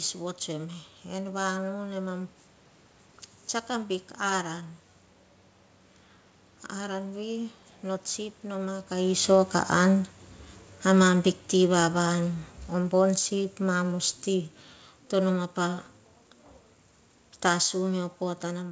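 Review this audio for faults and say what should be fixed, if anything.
Automatic gain falling from 10.83 to 14.57 s, just before "to noma pa": the gain control judged the input too loud or its background noise too strong and cut gain by about 6 dB, so speech and background sink together. The waveform envelope shrinks steadily and the spectrogram dims evenly. Capping AGC gain reduction would prevent it.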